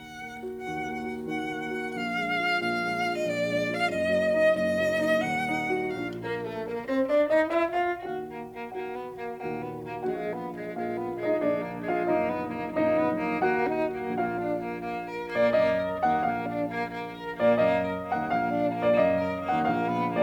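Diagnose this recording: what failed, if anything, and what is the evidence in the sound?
Nothing in this music recording points to a failure at any stage of the chain, so there's nothing here to diagnose.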